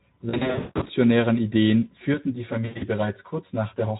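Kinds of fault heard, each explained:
VoIP packet loss concealed by the speech codec: lost packets were filled by extrapolating the last pitch and filter, smearing speech into a fading buzz or coloured noise around 0.3–0.9 s and 2.65–2.87 s.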